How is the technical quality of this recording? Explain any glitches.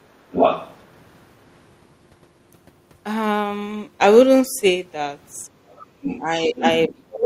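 Technical quality is poor in places. A second voice appears twice, the room sound briefly dips, and the main talker gets squeezed out near the end.

From 0.32 to 0.84 s, and again from 5.77 s to the end, another voice comes through: the other side's voice leaking through. The first time it is roughly as loud as the talker, and later somewhat quieter. The likely cause is a loudspeaker on the talker's device whose output reached the microphone and was not fully removed by the echo canceller.

Between 5.5 and 5.66 s the background sound ducks by about 7 dB for a brief moment, then comes back. This is background gated by the echo canceller, which clamped the microphone while the loudspeaker played and released it once the playback eased.

From 6.2 s to the end, the talker's own voice drops away very deeply while the far side is speaking. This is speech suppressed in double talk: with both sides talking at once, the canceller likely cannot tell the talker from the echo and turns everything down.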